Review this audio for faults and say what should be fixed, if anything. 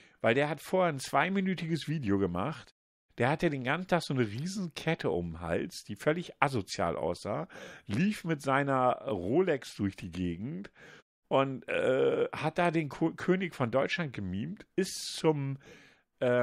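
No faults turn up in this speech recording, and nothing needs fixing: the background drops to silence in the pauses between phrases and returns in time for each new stretch of speech, which is the expected behaviour of the pause muting and loses only very quiet sound.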